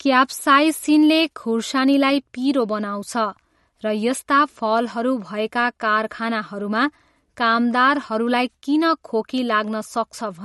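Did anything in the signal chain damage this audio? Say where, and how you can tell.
Yes, at the codec stage: a hard treble ceiling near 11.8 kHz and watery, swirling speech throughout, likely MP3 compression starved of bits, consistent with roughly 48 kbps. A spectrogram shows a flat cutoff and flickering high-frequency patches.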